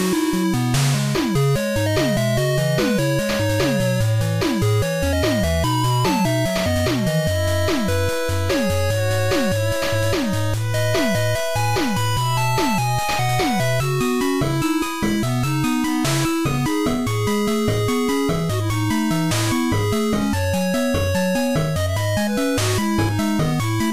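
Nothing technically wrong can be heard in this audio, so there are no times or causes to give.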